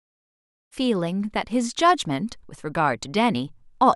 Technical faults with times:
none

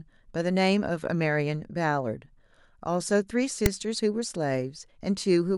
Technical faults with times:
3.66 file tags played as audio

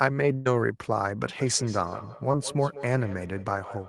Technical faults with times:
0.33-0.47 burst of packet loss
1.38-3.88 feedback echo between two devices
2.31-2.35 short concealed packet loss

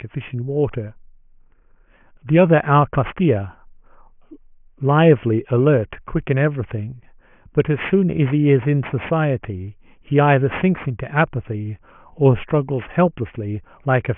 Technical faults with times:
0.00-14.17 aliasing

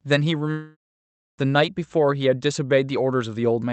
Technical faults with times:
0.51-0.95 long network dropout
1.25-1.38 clipped start after a pause

